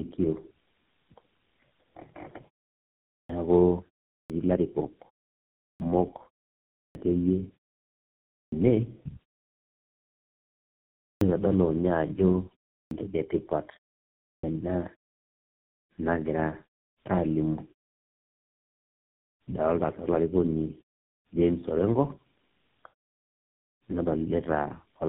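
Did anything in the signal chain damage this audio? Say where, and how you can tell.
Yes. Tandem speech coding runs throughout the clip, at the codec stage. The speech is rough, muffled and warbly, with nothing above about 3.8 kHz. Those artefacts stack up beyond what a single codec produces. That pattern points to three speech codecs in a row: GSM full rate at each end and an AMR-NB hop in between, joined by G.711 links. Each border decodes the speech and encodes it again, so every coder works on the previous one's degraded output.

Clipped start after a pause shows up at the playback stage at 3.2, 4.2, 5.69, 6.84, 8.41, 11.1, 12.81 and 14.33 s. Each time, speech resumes abruptly after a silence of roughly 0.3 to 1.9 s, and about 94 to 113 ms of its onset is missing. The output device drops into a sleep state during the silence. It then needs that time to wake and lock again, so the first sounds of each phrase are swallowed.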